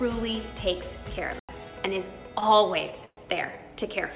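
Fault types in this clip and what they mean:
block of digital silence: a 93 ms hard cut to silence at 1.39 s, fitting an unfilled 4096-sample buffer.
call audio freeze: at 3.05 s the sound smears into a fading buzz or hiss, then silence, likely from a drained jitter buffer; it resumes 116 ms late, nothing lost.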